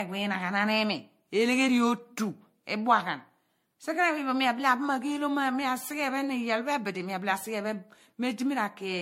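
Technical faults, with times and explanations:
throughout: generation loss; swirly, hollow speech with blurred onsets and nothing above 16.2 kHz, likely from about seven MP3 re-encodes near 62 kbit/s.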